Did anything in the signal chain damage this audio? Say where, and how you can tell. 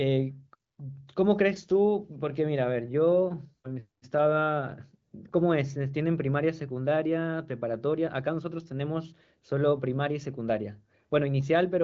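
No, nothing in the chain audibly damaged this speech recording. It has passed through the AMR wideband (HD Voice) codec, with nothing above about 7.5 kHz and speech that sounds clear, as expected at one of the codec's upper rates.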